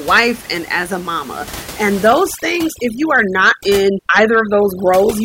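From 2.07 s to the end at 5.24 s the gaps drop and break up into twinkling specks, where before this point the room noise sat audibly about 17 dB below the voice. This is overdone noise removal: a noise reducer set far too strong is pulling individual frequency bands down or out whenever they come close to its noise estimate, taking the quieter parts of the voice along with the background.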